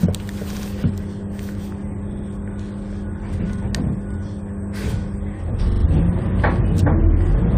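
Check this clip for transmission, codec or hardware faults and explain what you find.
Repeated frames are the fault here, at four points: 0.54 to 0.67 s, 2.12 to 2.25 s, 3.57 to 3.61 s and 5.70 to 5.83 s. A short run of compressed frames was delivered more than once, so the decoder plays the same slice again. The first two are 64 ms blocks heard three times in all. The third is a 42.7 ms block played twice. The last is a 42.7 ms block played four times. Each repeat gives a stuttering judder, and together they add about 0.43 s to the audio.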